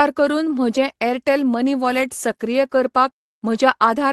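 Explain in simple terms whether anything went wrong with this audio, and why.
Nothing went wrong with this audio, because the speech came through an ordinary internet call connection that worked as it should, so what you hear is simply how such a call normally sounds.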